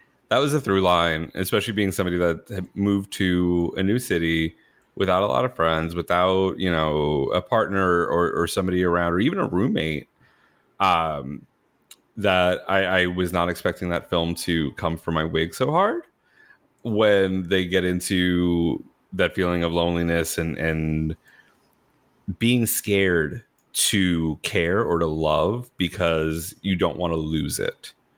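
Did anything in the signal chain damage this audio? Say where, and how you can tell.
No, nothing in the signal chain damaged this audio.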